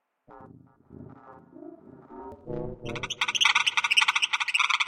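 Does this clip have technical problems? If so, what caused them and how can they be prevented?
Yes. At 4.58 s there are compressed frames skipped. The audio jumps ahead by about a tenth of a second, which fits a few frames of roughly 23 ms going missing from the file or being rejected as damaged by the decoder. To prevent it, verify file integrity after transfer and re-encode from a clean source.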